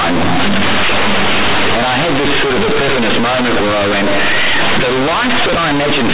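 Companded audio read as linear, throughout the speech: mu-law bytes are being played as plain 8-bit samples without expansion, so every sign change swings across half the range. Quiet passages come out as loud as peaks, giving harsh, buzzy distortion and heavy noise in pauses, over an 8 kHz telephone-band path.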